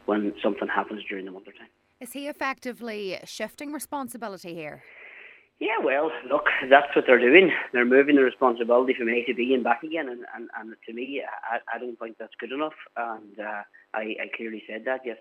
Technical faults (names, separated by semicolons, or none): none